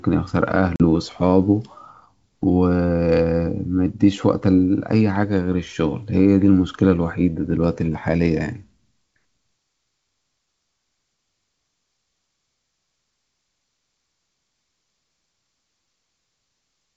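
At 0.76 s the wideband G.722 speech breaks off in a hard-edged silent gap of about 40 ms, roughly a couple of packets, the mark of packet loss on an ADPCM call. Unlike a plain dropout, the speech resumes by 0.83 s with brief distortion as the decoder's predictor and step size resynchronise.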